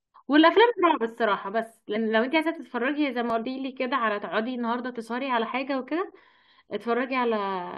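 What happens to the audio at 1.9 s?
At 1.95 s, compressed frames are skipped. Around ten frames never play, so the audio jumps ahead by about a fifth of a second, which fits frames of roughly 21 ms. The speech is heard to jump forward at the join.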